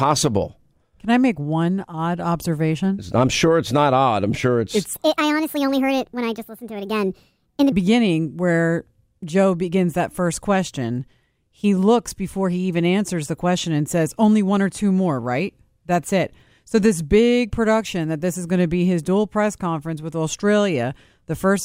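Speech recording with one section at the wrong speed: from 4.94 s to 7.72 s the voice suddenly runs about 1.42 times fast, so it jumps up in pitch by roughly seven semitones and sounds clipped and chipmunky before snapping back to normal. Because speed and pitch shift together, the likely culprit is that stretch being played or pasted in against the wrong clock rate rather than any deliberate pitch effect.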